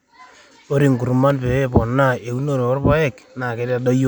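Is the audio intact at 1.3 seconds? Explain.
No. From 1.30 to 1.33 s a single loud pop, likely a voltage pulse from a switch or static, stands a few dB above the speech, which continues underneath.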